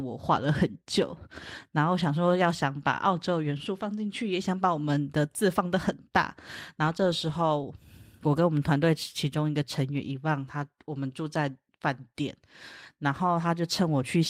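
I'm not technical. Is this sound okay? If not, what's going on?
Yes, nothing stood out as a problem when listening to this recording.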